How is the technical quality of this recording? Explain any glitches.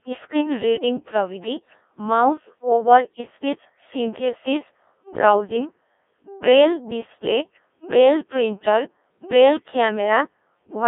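The technical quality is poor: the whole recording has passed through a heavy, very low-rate digital voice codec. Codec 2 vocoder damage runs throughout the clip. The codec does not keep the waveform. It sends only pitch, voicing, energy and a coarse spectral envelope, and the decoder rebuilds the speech from sine waves, at a rate that sounds like about 1.3 kbit/s. The result is robotic, buzzy speech confined to a narrow line band of roughly 250 Hz to 3.6 kHz, with nothing above 3.8 kHz.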